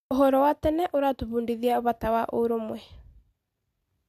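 No technical faults occur in this recording, so there is nothing to describe in time order.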